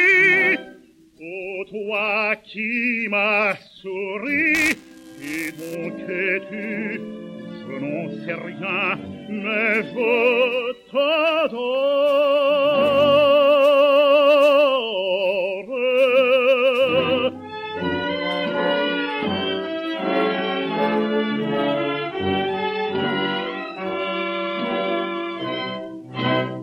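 Buffer tearing runs from 4.55 to 5.75 s. The writing side and the reading side of the playback ring buffer have drifted out of step, so their positions cross within every period. A small sliver of each buffer therefore plays audio from a few milliseconds earlier, with a hard splice on either side. The result is a rough, robotic buzz at 375 Hz, which fits a 128-sample buffer, and it is heard only while sound is present.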